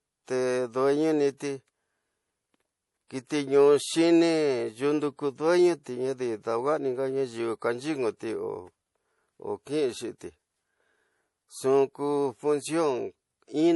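Throughout the speech, the treble stops abruptly at about 11.5 kHz, and the sound has a watery, swirling texture with smeared onsets. This is likely MP3 compression at a low bitrate, which fits roughly 48 kbps. With too few bits, the encoder cuts the top band at a fixed frequency and drops weak spectral lines. Those lines flicker on and off between frames, so the damage is plainly audible.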